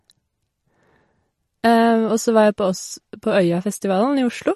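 Throughout the speech, nothing sounds above 13.1 kHz, and the sound turns watery and swirly. This is likely MP3 compression at a low bitrate, around 40 kbps.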